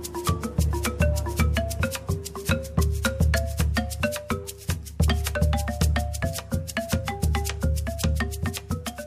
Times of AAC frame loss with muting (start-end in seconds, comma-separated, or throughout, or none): none